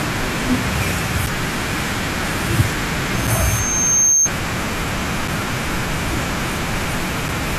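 From 0.88 to 0.99 s the speech is marred by brief blips of noise in individual frequency bands. This is DAB burbling: a low rate of bit errors slipped past error correction into the MP2 data, corrupting samples and scale factors across what sounds like several consecutive frames.

At 1.26 s a hard-edged hole of 6.5 ms cuts the speech, and it recurs at 3.27, 5.28 and 7.28 s, every 2.0 s. These are gaps between chunks: the audio was delivered in 2-second blocks with a sliver of silence inserted at each join, so nothing is lost but the flow is interrupted.

From 3.14 to 4.30 s a single tone at 6.4 kHz swells over about a second into a squeal, reaching about 5 dB above the speech. The chunk gap at 3.27 s briefly interrupts it. This is loudspeaker feedback squeal: a microphone picked up its own loudspeaker, and at that frequency the loop gain exceeded one, so the tone kept feeding itself.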